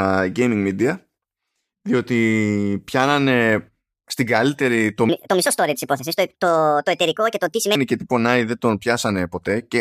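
A section at the wrong speed runs from 5.09 to 7.75 s: the speech plays 1.47 times too fast, so it turns hurried and jumps up in pitch by about seven semitones. This is likely from playback or editing against a mismatched clock.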